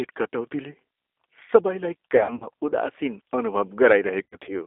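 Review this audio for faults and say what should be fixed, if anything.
G.729 codec throughout: the whole clip has that rough, slightly synthetic 8 kbit/s sound, with nothing above about 3.6 kHz and a thin low end below 300 Hz.

VoIP packet loss concealed by the speech codec, from 2.17 to 2.48 s and from 4.23 to 4.57 s: about 150 ms and then 120 ms of audio went missing in scattered gaps, the longest 60 and 90 ms. Each time the decoder stretched the last sound into a fading tone or noise, and it stayed weak briefly after real packets resumed.

To fix it, record locally or use a wideband codec like Opus with FEC and a deeper jitter buffer on a steadier network.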